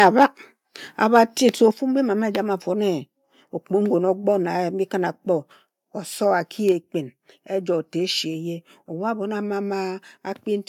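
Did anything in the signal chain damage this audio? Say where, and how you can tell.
Yes. Microphone overload at 0.00–0.26 s and 1.15–1.19 s: the loudest speech peaks turn harsh and crackly. The likely cause is input gain set too high at the converter, driving peaks about 5 dB and about 2 dB past full scale and flattening a small share of samples.

Microphone volume stepped down at 1.71 s, 4.05 s and 6.72 s: speech and background drop together, in single steps of about 5 dB, 1 dB and 2 dB. This likely comes from call processing cutting the device's input gain after detecting the earlier clipping.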